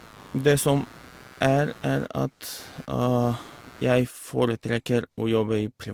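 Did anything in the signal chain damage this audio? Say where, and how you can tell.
Yes. In the analogue wiring, computer load currents are modulating the shared ground, producing computer activity noise from 0.0 to 4.02 s: a scratchy buzz pulsing around 100 times a second, roughly 25 dB below the speech, that follows the machine's activity rather than the speech itself.

At the codec stage, the speech carries two distinct layers of coding artefacts at once, with nothing above 20.2 kHz. This points to transcoding between lossy codecs, likely Vorbis at about 67 kbit/s re-encoded to Opus at 48 kbit/s, with Opus spending bits on Vorbis's artefacts.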